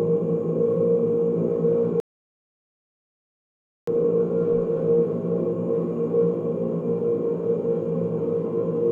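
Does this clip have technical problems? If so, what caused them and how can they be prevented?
Yes. A rebuffering stall runs from 2.0 s to 3.88 s: the sound drops to silence for about 1.87 s and then picks up exactly where it left off, with nothing skipped. The player exhausted the audio it had already downloaded and had to wait for more data before continuing, so the gap adds time rather than removing any. A larger start-up buffer or adaptive bitrate switching on slow connections would prevent it.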